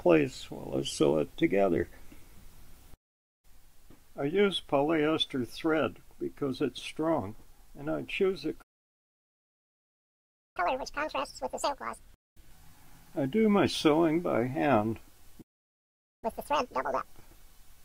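At 8.61 s the audio cuts out for about 1.9 s in a playback stall, likely from the player running out of data or its thread being blocked. From 10.57 to 12.51 s a catch-up at higher speed follows: playback runs at 2.0x, pitch rises by roughly 10 semitones, and it then returns to normal speed. Running double speed for as long as the gap lasted recovers the full time lost.

A second playback stall silences the audio from 15.41 to 16.24 s, about 0.8 s. A matching catch-up at higher speed runs from 16.24 to 17.05 s, again at 2.0x with pitch raised by roughly 10 semitones, and again makes up the lost time.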